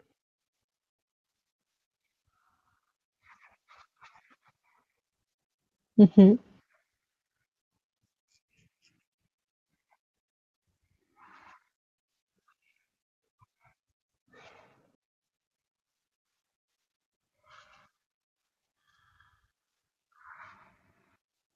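A speech recording in which compressed frames were skipped at 0.63, 7.37 and 14.95 s. Runs of 26.1 ms frames never decoded, so the speech jumps ahead by roughly 150, 200 and 300 ms, each join a short smeared blip.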